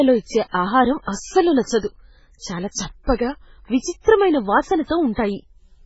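From start to finish the speech carries heavy MP3 compression damage, likely from an MP3 encoder starved of bits, consistent with a very low rate near 16 kbps. Nothing remains above 7.6 kHz, and weak frequency lines flicker on and off between frames. That gives a watery, swirly texture with chirpy sibilants, which sets it apart from a plain low-pass filter.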